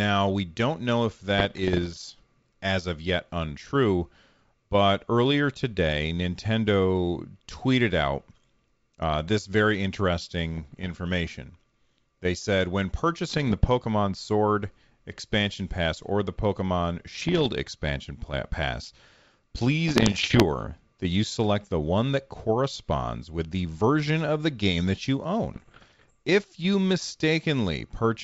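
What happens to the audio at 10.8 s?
That moment falls inside a short run of bit errors on an ADPCM link, from about 10.55 to 10.90 s. Around half a percent of bits flip, knocking the decoder's step size and predictor off track, so you get pops, gritty bursts and brief level jumps over the clear wideband G.722 sound.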